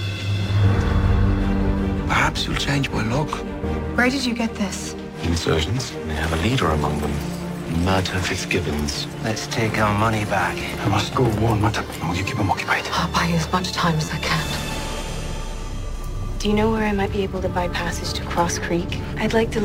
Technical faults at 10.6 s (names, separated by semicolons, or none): repeated buffer